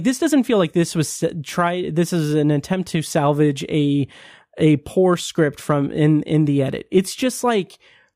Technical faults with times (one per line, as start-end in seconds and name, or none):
none